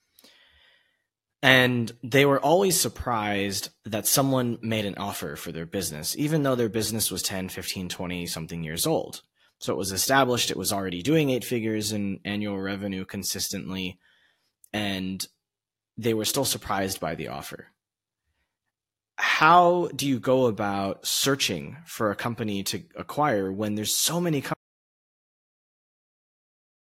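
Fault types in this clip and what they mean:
Audio dropout to silence: at 24.54 s the speech cuts off mid-flow and the last 2.3 s to the end are silent with no room tone, likely because the input was lost while the recorder kept writing silence, so whatever followed is gone.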